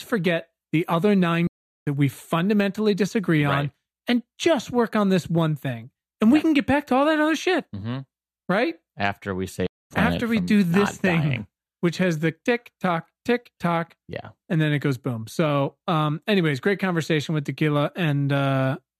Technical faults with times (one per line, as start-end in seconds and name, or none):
1.47-1.87 playback stall
9.66-9.91 playback stall